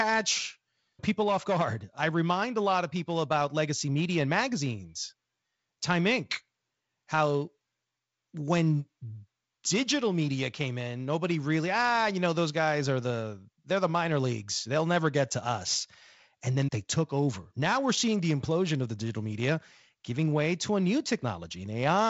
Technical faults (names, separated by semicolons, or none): none